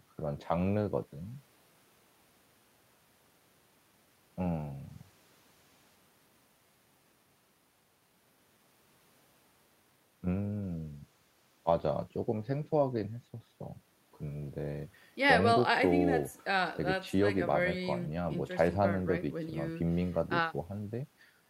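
No technical faults are audible anywhere in this recording of speech.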